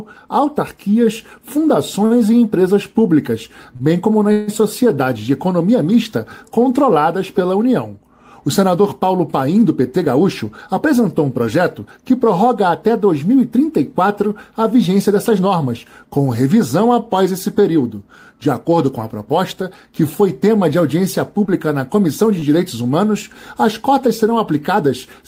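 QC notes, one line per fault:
2.05–4.50 s, repeated stalls (stutter): Packets arrived late or more slowly than they were played out, so the jitter buffer ran dry three times. Each time, the receiver stretched the last sound to cover the gap, for 234 ms in total and 152 ms at the longest, fading it during the longest wait. Nothing is lost, but about a tenth of this stretch is filler, so the audio drags and hiccups.
9.70–11.97 s, 14.88–15.47 s, 17.47–17.85 s, jitter buffer speed-up: The jitter buffer held more audio than its target, so the receiver repeatedly cut out tiny pitch-period slices to catch up. In the first run playback reaches 105% speed and removes around a seventh of a second. The second and third runs are shorter, at 107% and 108%, and each drops a few hundredths of a second. Pitch stays put, but the sound feels rushed and hurried.
21.45–21.49 s, short concealed packet loss: About 20 ms of audio failed to reach the decoder in time. 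The receiver filled the hole with 21 ms extrapolated from the preceding sound, then blended back into the real signal. The result is a brief smear or wobble.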